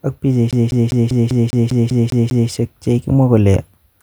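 A speech recording with a CD stuck on one turn from 0.51 to 2.50 s. A scratch keeps throwing the laser back one track, so the same 0.2 s slice repeats ten times, each jump marked by a brief mute. Unlike echo, nothing decays, and the stutter's rate stays perfectly even.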